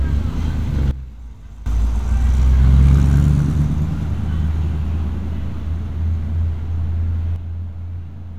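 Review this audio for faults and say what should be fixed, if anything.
Two sudden gain jumps stand out. At 0.91 s the level drops by about 15 dB in one step and snaps back at 1.66 s, and at 7.36 s it falls by about 6 dB and stays down to the end. The background noise drops right along with the sound, so the whole signal is being scaled, likely by a gain setting applied instantly with no ramp. Smoothing every gain change over a few milliseconds would prevent it.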